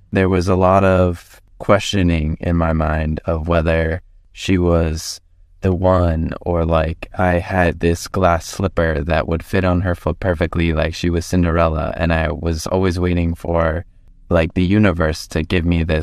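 Listening through this speech recording, nothing stood out as a technical problem at any point.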